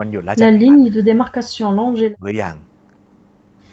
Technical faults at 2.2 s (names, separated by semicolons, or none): speech suppressed in double talk